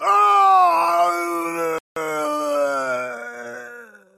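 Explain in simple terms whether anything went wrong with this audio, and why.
Something did go wrong: at 1.78 s the sound cuts out completely for about 180 ms, then picks up again at 1.96 s. That's a playback stall. The player likely ran short of data or got held up for a moment, so nothing came out until it caught up.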